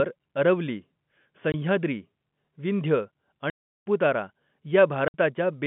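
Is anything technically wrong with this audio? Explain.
Yes. The speech has packet loss filled with silence. Packets of the stream went missing on the way, and the receiver played nothing in their place. This cut holes at 1.52 to 1.54 s (20 ms), 3.50 to 3.84 s (360 ms) and 5.08 to 5.14 s (60 ms). All three lengths are multiples of 20 ms, which fits 20 ms packets. Each gap drops abruptly to dead silence, with hard edges. The telephone-band G.711 coding around these holes can be heard as narrowband line audio.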